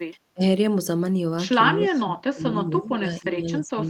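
A short speech recording with two kinds of echo-control fault. At 0.34 to 0.42 s the voice briefly ducks, losing roughly 70 ms of level in a dip that reaches about 25 dB, the sound of speech suppressed in double talk, likely caused by an echo canceller mistaking near-end speech for loudspeaker echo while the far side was also talking and attenuating everything it could not separate. The same suppression returns from 1.75 s to the end of the clip, holding the voice down by up to about 20 dB, which points to a sustained period of overlapping talk during which the canceller kept its gain reduced. Inside that stretch, from 1.88 to 2.01 s, a faint delayed copy of the voice is heard trailing it by 279 ms at about 25 dB below the direct speech. This is echo leak, likely from a loudspeaker-side echo canceller that failed to remove all of the playback its microphone picked up and sent the residue back down the line.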